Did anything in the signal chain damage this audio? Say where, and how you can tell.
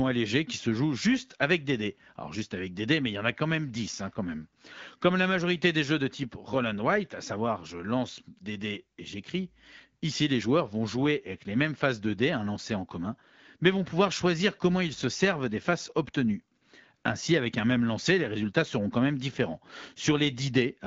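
Yes, AMR comfort noise from the codec: at 16.57–16.61 s and 16.97–17.03 s speech frames stop, and smooth synthetic hiss replaces the real background rather than packet-loss silence.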